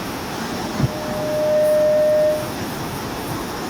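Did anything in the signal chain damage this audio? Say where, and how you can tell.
Yes, there's loudspeaker feedback squeal in the acoustic and analogue path, where the mic is hearing its own speaker. From 0.44 to 2.71 s a steady 611 Hz tone swells over about a second to roughly 10 dB above the speech, because loop gain tipped past one at that frequency.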